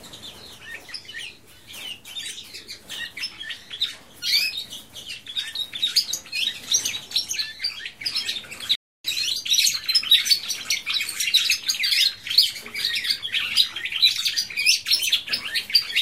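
At 8.75 s the audio cuts out abruptly in mid-flow and stays silent until 9.05 s, a gap of 289 ms, before playback picks up again. This is a playback stall: the output stops because nothing is reaching it, most likely because the player's buffer ran dry or its audio thread was briefly blocked. The gap sounds like a clean hole rather than a fade, with the sound halting and restarting sharply at its edges.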